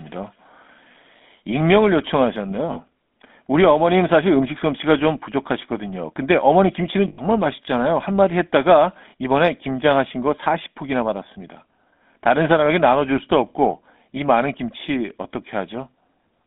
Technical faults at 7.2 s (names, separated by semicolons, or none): GSM full-rate codec; lost GSM frames